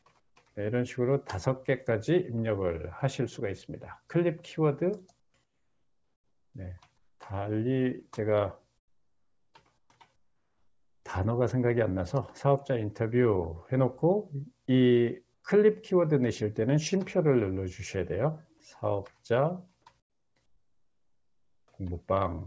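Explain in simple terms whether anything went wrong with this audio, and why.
Comfort noise in place of the background shows up seven times: 0.2–0.36, 5.2–6.54, 6.98–7.2, 8.78–9.9, 10.16–11.04, 15.34–15.44 and 20.0–21.68 s. In each gap, the real background turns into flat hiss, quieter in four of them. The call likely paused sending and filled quiet moments with fake noise.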